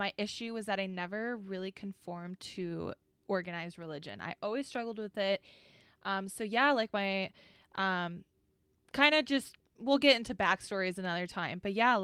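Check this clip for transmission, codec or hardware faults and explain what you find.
Three short stretches of the speech come from lost packets rebuilt from error correction, at 0.89 to 0.99 s, 2.55 to 2.61 s, and 10.45 to 10.55 s. Each following packet carried a low-bitrate copy of the lost audio, which the decoder played instead, so there's no gap, just briefly rougher, noisier sound.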